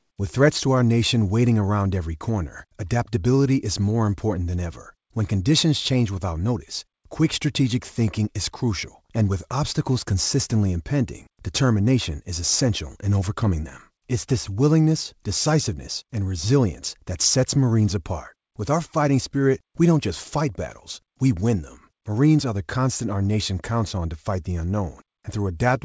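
Nothing goes wrong here; the speech comes over the way an ordinary call does, with the top end stopping at 8 kHz, which fits a wideband call codec like G.722 doing its usual job.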